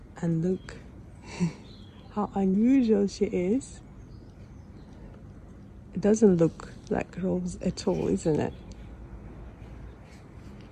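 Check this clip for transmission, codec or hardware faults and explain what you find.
One fault is audible. At 2.54 s, compressed frames are skipped. Several whole frames never reach the output. The audio jumps ahead by about 150 ms, which fits roughly seven frames of 26.1 ms each. Overlapping frames soften the join into a short smeared blip, not a click.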